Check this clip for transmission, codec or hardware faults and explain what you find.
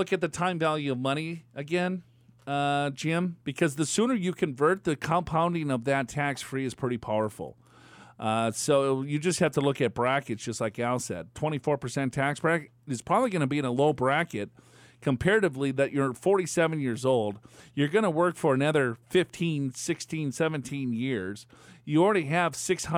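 Nothing to flag here: the speech comes through steady and intact, with no transmission, codec or hardware trouble to point to.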